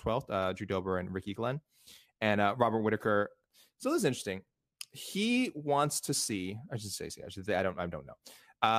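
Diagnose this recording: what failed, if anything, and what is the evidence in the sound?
The driver or buffer stage slipped once: a repeated buffer at 7.10 s in this speech. A block of about 1.45 ms, which fits a 64-sample buffer, played one extra time with a hard join because fresh audio arrived late, so it's a click or brief buzz rather than a stutter.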